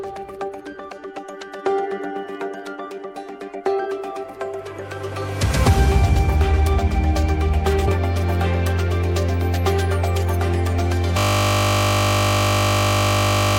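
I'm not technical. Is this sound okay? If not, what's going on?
No. Two things go wrong.

Around 7.87 to 7.90 s there's a stream segment skipped. Audio like this is usually delivered in small chunks, and most likely one chunk failed to arrive, so the player simply carried on with the next. What you hear is a sudden jump forward with a small blip, as if a moment of the recording had been snipped out and the two ends joined.

From 11.18 s to the very end there's a system hang loop. The computer froze, but the sound hardware kept replaying the last tiny slice of audio it was holding, just 20 milliseconds long, over and over, about 120 times. Repeating that fast, 50 times a second, it no longer sounds like the recording at all but like a steady, flat buzz that never lets go.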